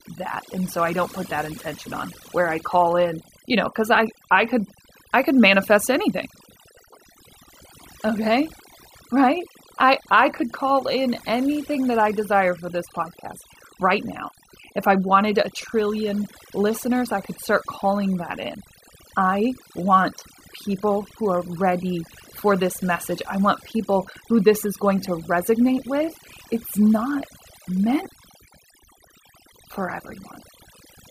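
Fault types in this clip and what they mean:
Overdone noise removal, present throughout the speech: a noise reduction process set far too aggressively treats any frequency band sitting close to its noise estimate as unwanted and pulls it down to almost nothing, so the gaps between phrases fall to near silence dotted with sparkling fragments, while the softer parts of the voice are stripped away along with the noise.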